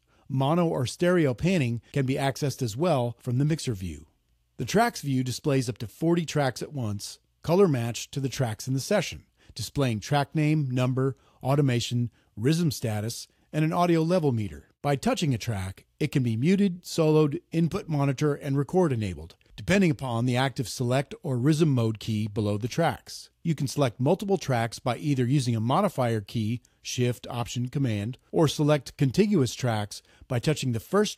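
Nothing stood out as a technical fault on listening.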